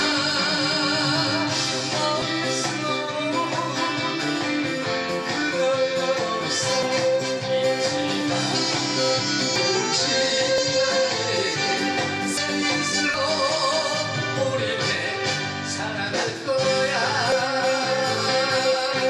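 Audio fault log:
6.83, 9.56, 10.58, 12.37, 13.14 and 17.32 s: dropped buffer (overrun). At each point the sound jumps abruptly forward, skipping roughly 100 to 150 ms, with no gap of silence where the two ends meet. This is likely samples overwritten before being read out. A waveform shows a sudden discontinuity. A spectrogram shows a thin full-height vertical line and an abrupt change in content.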